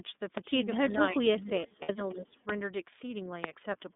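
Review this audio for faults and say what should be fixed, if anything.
The whole clip is speech carried through the iLBC codec. Nothing passes below about 200 Hz or above 3.6 kHz. The voice stays clear but sounds rough and slightly synthetic, and the codec damage is plainly audible. That texture comes from coding each short frame's excitation on its own, which fits 30 ms frames at the 13.33 kbps mode. To prevent it, use a wideband codec such as Opus wherever both ends support it.

Speech suppressed in double talk shows up twice. From 0.93 to 1.18 s the level dips briefly, by about 5 dB. From 1.39 to 2.38 s it drops much harder, by about 25 dB at worst, and the voice breaks up for roughly 0.7 s in total. The likely cause is an echo canceller that took the talker for loudspeaker echo while both sides spoke, and turned the talker down. To prevent it, tune the canceller's double-talk detector so it keeps near-end speech during overlap.

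Lost iLBC frames leave a gap from 1.82 to 1.90 s, which fits two lost 30 ms frames, or 60 ms. The decoder filled the hole by repeating the last pitch cycle with added noise. So the gap sounds like a held, faintly buzzy vowel. Normal speech returns at once after it, because each frame decodes independently. This gap falls inside the deeper suppressed stretch. To prevent it, add jitter buffering and forward error correction on the network path.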